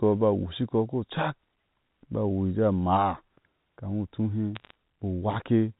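A brief burst of sharp ticks and crackle sits over the speech from 4.55 to 4.74 s. These are bit errors on a digital phone line. Flipped bits in the telephone-band G.711 stream, at a rate of a few tenths of a percent, corrupt single samples, and hits on high-order bits jump as clicks.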